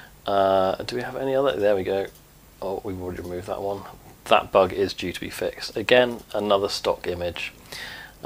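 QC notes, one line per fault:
No faults heard anywhere in this clip.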